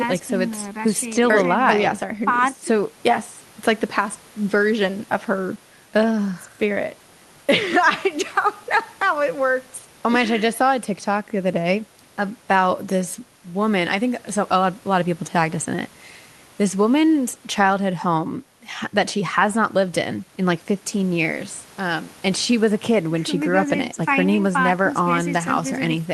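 No faults can be heard in the speech, which carries the ordinary coding character of a call codec and a top end that stops around 12 kHz, as expected from an Opus call path.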